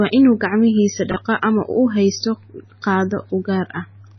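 From the very start the speech sounds watery and swirly, with a metallic chirp on the s sounds, softened consonant attacks, and nothing above 6 kHz. This is likely MP3 compression at a very low bitrate, around 19 kbps. With so few bits, the encoder cuts all treble above a fixed frequency and drops quieter frequency components, which flicker on and off from frame to frame and create the swirling, chirpy texture.

At 1.12 to 1.16 s there is a brief jumbled stutter, caused by chunks out of order. One block of about 23 ms played one position later than it should have, so it comes after the block that was meant to follow it. No audio is lost, but the wrong order creates three hard joins.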